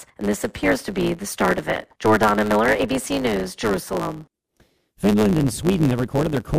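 From start to finish the speech carries a block size mismatch (truncated): one stage hands over longer blocks than the next stage takes in, so the tail of every block is discarded. The periodic joins produce a steady buzz at about 109 Hz, the block rate, and the dropped material makes the speech run fast by a factor of 1.09. The timbre is preserved.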